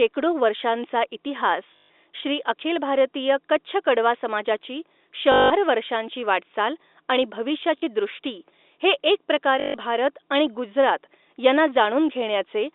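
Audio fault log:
1.76–1.90 s, 5.32–5.50 s, 7.78–7.82 s, 9.60–9.74 s: packet loss with last packet repeated. Brief robotic stutters buzzing near 50 Hz. The receiver replayed the last packet to fill gaps of 140, 180, 40 and 140 ms, which fits 20 ms packets. The first gap comes just before "श्री अखिल भारतीय कच्छ".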